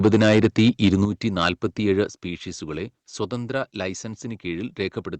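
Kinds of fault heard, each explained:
Microphone overload: The input gain was likely set too high, driving peaks about 5 to 6 dB past the converter's limit so their tops are sheared flat. This gives a harsh, crackly edge from 0.04 to 1.05 s and again briefly at 1.45 s.
Microphone volume stepped down: The call software likely reacted to the loud input by cutting the device's input gain in a single step. Speech and background drop abruptly, by about 7 dB at 1.05 s and a further 5 dB at 2.07 s.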